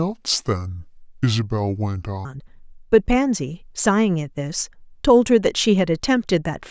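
Speech, with a wrong sample rate fault from 0.0 to 2.25 s: the opening plays at two-thirds speed and about 7 semitones low, so the voice sounds slow, heavy and deepened before snapping to normal. That ratio fits 24 kHz audio played back at 16 kHz without conversion. On a spectrogram, harmonics and formants in this stretch sit lower and closer together, and the top of the band drops to two-thirds its height. The waveform looks stretched in time.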